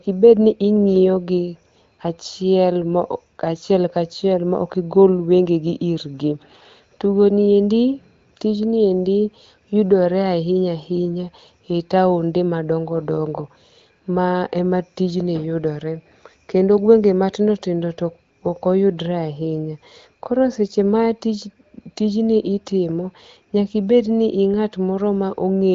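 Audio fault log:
No faults heard.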